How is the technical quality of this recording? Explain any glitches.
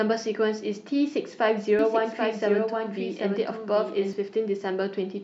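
The recording has one clear fault. From 1.79 to 4.13 s, a doubled audio track appears: a second full-band copy of the speech trails about 0.7 s behind, roughly 5 dB quieter, with no reverberant tail. It starts and stops abruptly, most likely from a slower capture path.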